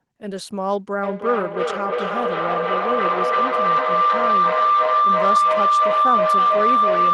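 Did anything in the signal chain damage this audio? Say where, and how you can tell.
Yes. Feedback howl takes over from 1.03 s and runs to the end of the clip. The stage is the acoustic path around the call: a microphone is picking up a loudspeaker in the same room. Each trip around that loop comes back louder, so the repeats climb instead of dying away. They narrow to a tone around 1 kHz, with the loop repeating roughly every 300 ms. At its peak it sits about 7 dB above the speech.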